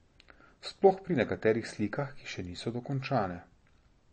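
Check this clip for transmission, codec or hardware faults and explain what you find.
One codec fault runs through the entire speech clip. It is likely MP3 compression at a low bitrate, around 32 kbps. Nothing remains above 8.4 kHz, and weak frequency components flicker between frames, giving a plainly audible watery, swirly texture.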